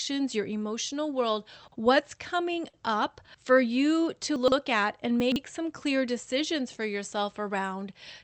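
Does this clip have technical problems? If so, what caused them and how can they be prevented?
Yes. Chunks out of order at 1.68 to 1.76 s, after "your emotional world", 4.36 to 4.52 s, and 5.2 to 5.36 s, after "at and": a 40 ms chunk is played one or three chunks late, jumbling the sound. Sequence-numbered reordering before playback prevents this.

A short stall from a late packet at 2.69 to 2.76 s, before "up for you to", holds the preceding sound about 42 ms while the jitter buffer waits empty. A slightly deeper adaptive jitter buffer prevents this. The call path's band limit near 8 kHz suggests Opus coding.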